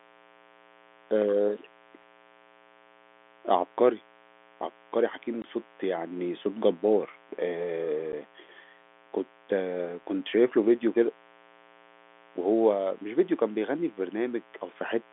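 From start to finish a mains buzz runs under the speech, sitting roughly 30 dB below it. Sharp switching spikes from a dimmer, rectifier or poor shielding are entering the signal twice per 60 Hz cycle. That sprays harmonics up through the spectrum, and inside the telephone band of the G.711 line they reach to about 3.5 kHz. The result is a raspy, edged buzz that never changes, rather than the smooth low hum of a plain 60 Hz tone.

At 5.42 to 5.44 s the audio drops out for 20 ms, and at 8.12 s there is a shorter 10 ms gap. Both are packet loss filled with silence. The receiver got nothing for those stretches and inserted pure silence, and the two lengths fit losing two 10 ms packets and then one. Each hole has abrupt edges, and the speech disappears inside the gap. That sets these apart from a level dip or a fade, where some signal would remain.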